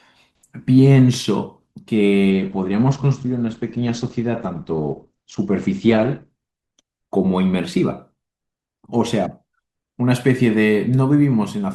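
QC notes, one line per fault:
2.30–6.30 s, adaptive stream at a lower bitrate: the speech suddenly goes dull, nothing above 8.7 kHz, then snaps back with no gap. The stream switched to a lower-bitrate version, which fits a drop from 64 to 16 kbit/s Opus.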